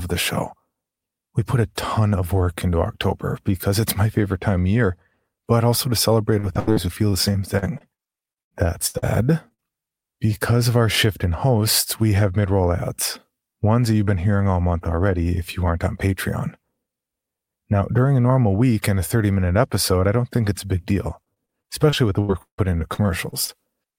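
From 6.39 to 9.04 s, just after "but also to celebrate", packets are lost or arrive late over and over. The receiver patches each hole by extending the last sound, and more than a dozen such patches follow one another, the longest about 90 ms, covering about a fifth of the stretch. This repeated packet loss gives the speech a choppy, robotic texture with fragments missing.

Shortly afterwards come two short concealed packet losses, at 9.48–9.52 s and 9.54–9.60 s, right before "because of our shift". In each, a few hundredths of a second fail to reach the decoder in time, and the receiver fills the hole by continuing the preceding sound before blending back into the real signal. Each one is heard as a brief smear or wobble.

From 21.24 to 23.50 s, after "it's a big deal", repeated packet loss returns. The holes again come in quick succession, here with one reaching about 155 ms, and the concealment covers roughly a fifth of the span. 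The same choppy, broken-up quality results.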